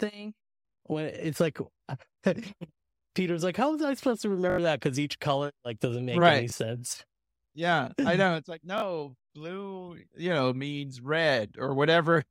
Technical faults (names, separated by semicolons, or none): repeated buffer